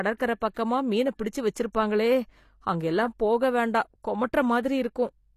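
From the start of this speech clip the top end sounds synthetic. Sibilants come out gritty and lispy, with a metallic sheen, and nothing is present above 14.9 kHz. The likely cause is HE-AAC compression: the upper band is rebuilt by spectral band replication rather than coded, so the treble is copied up from lower bands and its harmonics fail to align with the real ones. The plainly audible damage fits a low bitrate, around 24 kbps.

Pre-echo occurs at 0.40 s as a short hiss spread over about 16 ms just ahead of an onset. It recurs from 0.54 to 0.56 s, spread over 26 ms, immediately before "மீன பிடிச்சு", and from 1.73 to 1.75 s, spread over 20 ms, just after "மீன பிடிச்சு". Each time the codec's quantisation noise, sized for the loud attack, has been smeared across its whole transform block into the quiet gap before it, so the attacks sound softened.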